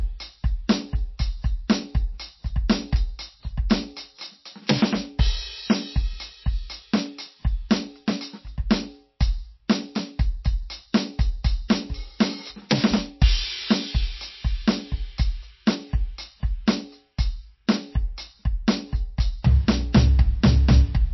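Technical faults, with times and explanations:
Throughout, MP3 compression: the music has nothing above 5.8 kHz and sounds watery and swirling as weak frequency lines flicker, unlike a clean low-pass filter, likely from encoding near 27 kbps.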